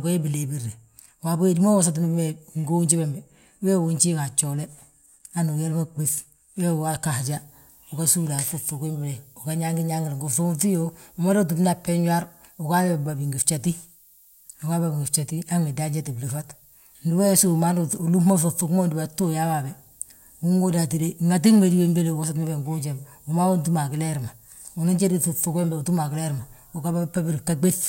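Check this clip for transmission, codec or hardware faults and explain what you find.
One fault is present: low bit depth with noise shaping, running from 7.23 s to the end of the speech. From that point the signal is carried at what sounds like about 9 bits. The rounding error from that coarse quantisation is fed back and shaped so its energy is pushed toward high frequencies. The result is a steady, thin hiss that climbs sharply toward the top of the band, sitting only about 25 dB below the speech.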